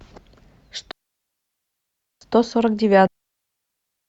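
At 0.91 s the speech drops into a digital wireless dropout lasting 1.3 s, to 2.21 s; a second begins at 3.07 s and runs about 1.02 s to the end. In each, the receiver lost too much of the data stream and muted itself with a very brief fade, leaving a clean hole of near silence with no crackle or noise burst at either edge. The waveform flattens almost instantly; the spectrogram shows blank vertical gaps across all frequencies.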